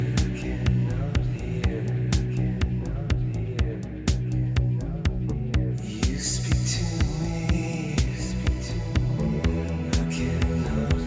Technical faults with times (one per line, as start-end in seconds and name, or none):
none